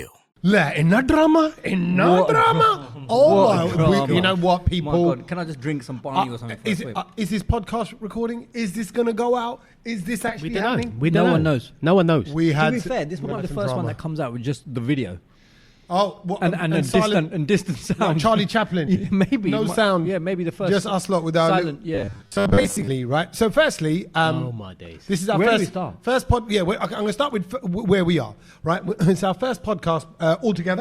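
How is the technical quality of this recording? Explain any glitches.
The recording has four audible glitches: three short scrambles and one robotic stretch.

Frames out of order occur at 10.27–10.33 s, 13.26–13.39 s and 18.87–19.06 s. In each, two adjacent blocks of audio were decoded in swapped order, about 20 ms per block in the first, 60 ms in the second and 80 ms in the third. You hear a brief garbled flutter. Unlike a dropout, nothing goes missing and the timing afterwards stays intact. The material is only rearranged.

Robotic sound from repeated short buffers runs from 21.95 to 22.88 s. The sound turns into a rigid, metallic buzz pitched at 100 Hz, while the underlying contour still roughly comes through. The likely cause is new audio arriving too slowly, so the playback fills gaps by looping a tiny slice, which fits a 10 ms buffer. Roughly half the real audio is skipped. The steady, fixed pitch separates it from comb-filter or phaser colouring, which sweeps or shifts rather than holding one tone.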